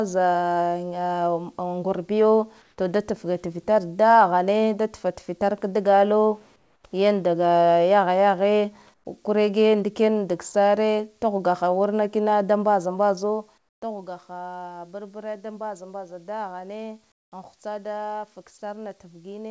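At 2.62–2.78, 6.56–6.84, 8.94–9.06, 13.58–13.82 and 17.12–17.32 s, comfort noise replaces the background: pauses lasting 120 to 280 ms turn to flat, featureless hiss, increasingly quieter by up to about 23 dB, likely from discontinuous transmission.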